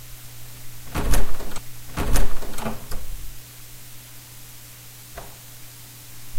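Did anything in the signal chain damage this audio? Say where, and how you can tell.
Yes. At the playback stage, a stream segment repeated: from 1.54 to 2.56 s about 1.02 s of sound plays a second time, with a small blip where playback jumps back. A buffer stutter would repeat only short fragments, but here a whole segment was queued twice.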